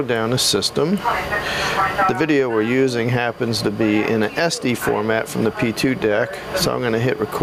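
Throughout the clip the gain ducks sharply under each loud sound, a swing of around 20 dB that leaves everything squashed and flat in level. This is gain pumping, likely from gain set far too high and a fast limiter clamping down on each peak.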